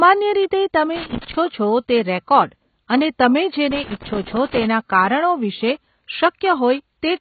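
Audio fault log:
Throughout: AAC compression, likely. Nothing gets above about 4.6 kHz, so the speech sounds dull and boxed-in, and the heavy smearing and fizz on sibilants fit a very low bitrate around 16 kbps, where the codec starves and drops high bands.
0.96–1.35 s and 3.71–4.64 s: loose connector crackle. Two irregular bursts of scratchy crackle, the second one longer. That's a dodgy contact making and breaking as it moves, chopping the signal up.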